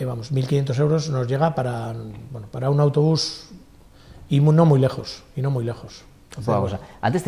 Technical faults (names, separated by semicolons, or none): none